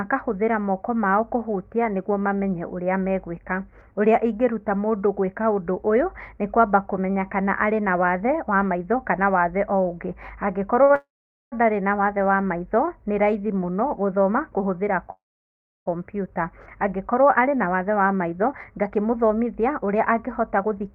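At 10.83 to 10.91 s, a short stall from a late packet holds the last sound about 61 ms. On a spectrogram, the harmonics run flat and unchanging, and nothing is lost.

Call audio freezes follow at 10.95 to 11.54 s and at 15.12 to 15.88 s, likely from packets held up in transit. A fading buzz drops to silence for 450 ms and 660 ms. The waveform shows tapering blocks, then flat gaps.

From 17.44 to 20.88 s, a jitter buffer speed-up plays the speech at 109% speed with unchanged pitch. About 0.3 s is trimmed away, so the speech sounds hurried. The spectrogram shows compressed timing but steady harmonic spacing.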